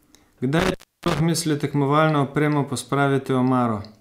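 From 0.59 to 1.2 s there's an intermittent contact: a loose plug opens for about 320 ms, so the speech drops out with crackle and faint hiss before "misli tekmovalno opremo".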